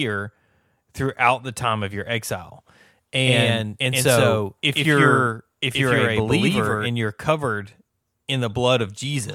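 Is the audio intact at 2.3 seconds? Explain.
Yes, the speech at 2.3 seconds plays through cleanly, with no dropout, click, distortion or other fault at that moment.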